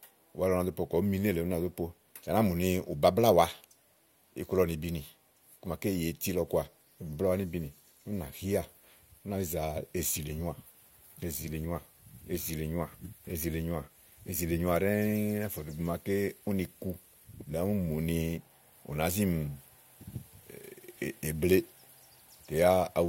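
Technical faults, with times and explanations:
No technical faults detected.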